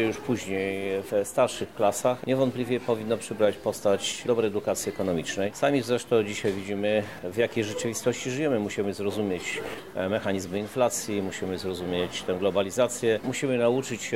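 No faults detected anywhere in the recording.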